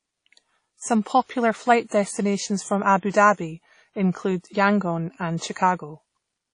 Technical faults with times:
0.00-6.54 WMA compression

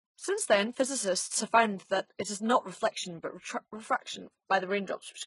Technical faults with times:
0.00-5.26 transcoding between lossy codecs

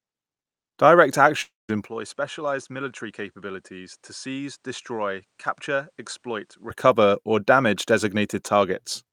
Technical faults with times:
1.41-1.70 long network dropout
1.88-6.70 input switched to a poorer device

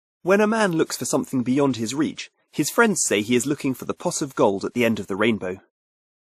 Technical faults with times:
0.00-6.31 transcoding between lossy codecs

